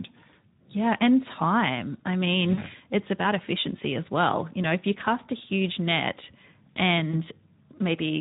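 Throughout the speech there is a hoarse, grainy roughness with a noisy edge on voiced sounds, plainly audible from start to finish. This is Speex codec damage: the CELP coder has too few bits to model the excitation, which fits an 11 kbps Speex stream.

At 2.53 s, right after "and time I mean", the voice is stretched into a fading sound until about 2.62 s. Afterwards it stays weak before "it's about efficiency as". At 7.11 s a shorter smear of the same kind appears. Both are VoIP packet loss concealed by the speech codec. The decoder filled the gaps by extrapolating its last pitch and filter at falling gain. The first gap fits two lost 20 ms frames, and the second fits one.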